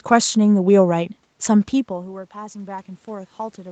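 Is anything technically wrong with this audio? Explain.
Yes. From 1.87 s to the end of the clip, the speech and the room noise behind it swell together, growing steadily louder over nearly two seconds rather than jumping. This is automatic gain rising. After the talker moved away from the microphone around 1.5 s, the input fell by about 18 dB. The call's gain control judged the signal too quiet and gradually raised its gain, lifting the background along with the speech.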